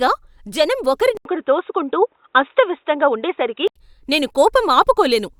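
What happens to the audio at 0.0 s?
At 0.0 s the speech starts cleanly with no dropout, click or distortion, and the audio is intact at that moment.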